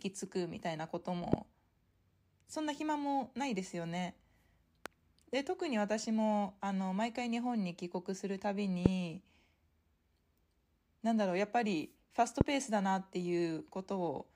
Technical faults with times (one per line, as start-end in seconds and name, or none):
1.33-1.36 loud pop
4.86-4.88 loud pop
8.86-8.88 loud pop
12.41-12.43 loud pop